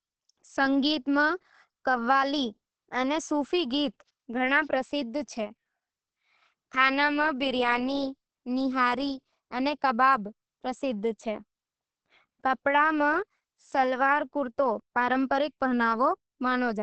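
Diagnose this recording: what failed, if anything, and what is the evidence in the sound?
Opus compression throughout, at the codec stage: the speech sounds muffled and hoarse with nothing above 8.4 kHz, likely from Opus's SILK speech mode at about 16 kbps.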